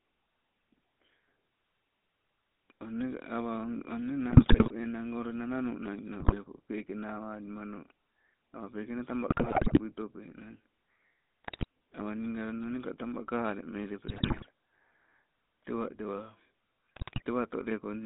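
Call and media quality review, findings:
GSM full-rate codec, whole clip: buzzy, gravelly speech, band roughly 200 Hz to 3.7 kHz. Pulse-excited vocal-tract model with decimated excitation; grain fits a 13 kbps GSM full-rate path. Distinct from narrowband filtering alone: roughness present, not just dullness.

GSM bit errors: squawks, pops and gargling at 4.30–4.72 s, 6.20–6.36 s (just before "pekee nawalimano"), 9.30–9.81 s (just after "peke nee taba"), 11.44–11.64 s, 14.08–14.47 s, 16.96–17.22 s. Corrupted filter, pitch or gain parameters bending spectrum or level per frame. Unlike packet loss: distorted bursts, not gaps.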